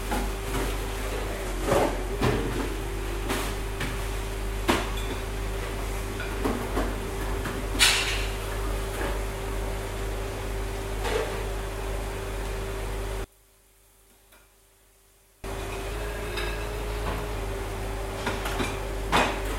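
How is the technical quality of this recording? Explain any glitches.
Two glitches stand out, both in the last few seconds.

From 13.24 to 15.44 s the level falls by about 27 dB, leaving a faint trace. The likely cause is one channel inverted: with one side's polarity flipped, anything common to both channels cancels when they're summed to mono, so only the faint difference between them survives.

From 15.91 to 17.35 s everything runs about 5.8% fast and sits roughly 98 cents sharp, close to a semitone, then snaps back. That points to a likely drift correction step, where clock-matching software abruptly changed the playback rate to rebalance its buffer.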